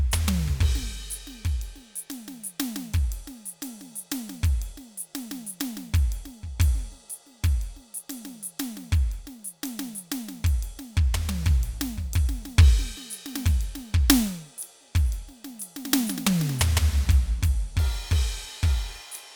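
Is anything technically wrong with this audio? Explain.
No, nothing technically wrong stood out on listening to this music.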